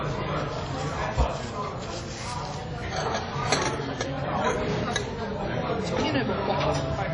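WMA compression throughout: nothing above 10.1 kHz, with ringing, washy smearing and hiss breathing with the sound, likely from a low-bitrate transform encode, fitting roughly 32 kbps.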